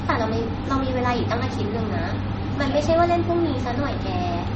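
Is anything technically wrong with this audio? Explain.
Yes. Throughout the speech, nothing reaches above 8.2 kHz, and a dull, swirly coding texture sits over every syllable. This is likely low-bitrate audio saved at a high bitrate: an MP3 near 32 kbit/s re-encoded as MP3 around 192 kbit/s, which cannot restore what was discarded. A spectrogram shows a hard ceiling at 8.2 kHz.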